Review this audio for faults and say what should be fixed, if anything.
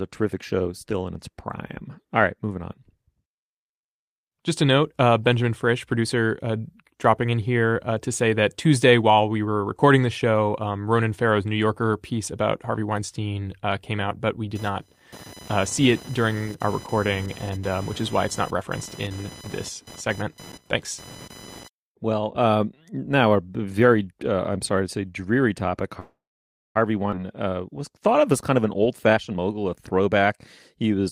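From 14.55 to 21.68 s, starting right after "came out but we", there is computer activity noise: a buzzing, chirping layer pulsing at roughly 1 kHz, about 20 dB below the speech. It follows the machine's processing load rather than the talker, because load changes in the processor, graphics card or mouse shift the ground shared with the audio circuit. To prevent it, break the ground loop with an isolated or external USB interface, or a ground-lift isolator.

At 25.99 to 26.77 s, just after "to say dreary topic", the call audio freezes. The last sound is stretched into a fading buzz, then goes silent for about 0.58 s, and the speech resumes where it stopped. That puts a 0.76 s gap into the audio and adds the same amount of delay, with nothing lost. This is likely caused by delayed packets draining the jitter buffer. To prevent it, reduce network congestion or allow a deeper jitter buffer.

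At 27.11 to 27.14 s, just before "uh was thought of", playback skips ahead. Roughly 0.4 s of speech is missing, and the two sides are joined through an 11 ms fill. Later audio was already queued, so the dropped stretch was discarded rather than waited for. This cuts the delay built up by the freeze by about 0.4 s. To prevent it, keep packet delivery steady so the buffer never overflows and forces a discard.

From 28.50 to 30.91 s, a jitter buffer speed-up makes the speech run at 114% of normal rate with its pitch unchanged, so it sounds hurried. The receiver repeatedly removed short pitch-period slices, roughly 0.4 s in total, to pull its excess buffered audio back toward target. To prevent it, stabilise network jitter so bursts of delayed packets do not overfill the buffer.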